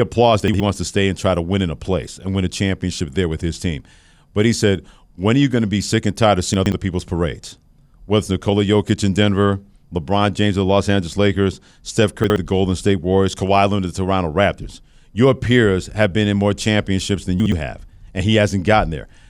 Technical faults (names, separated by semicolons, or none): chunks out of order